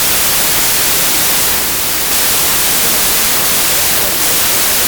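From start to finish the speech sits under loud, harsh noise, running about 1.33 times too fast and pitched up, a wrong sample width fault. This fits packed 24-bit data read as 32-bit words, so most samples straddle byte boundaries and only fragments keep the signal's top bits.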